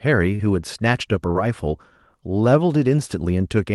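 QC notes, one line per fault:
0.35–0.42 s and 1.31–1.38 s, short concealed packet loss: About 40 ms of audio failed to arrive in time at each point. The receiver patched each gap by extending the sound just before it, carrying the pitch forward where the speech was voiced and using shaped noise where it was not. It then crossfaded back into the real signal. Each patch is heard as a brief smear or wobble, and a short consonant can drop out.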